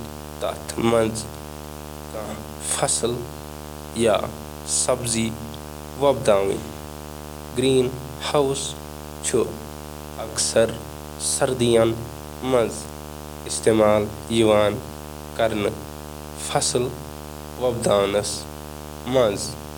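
Throughout, video or display buzz: a 75 Hz field-rate buzz with hash above it, about 15 dB below the speech, from a screen or video cable coupling into the audio.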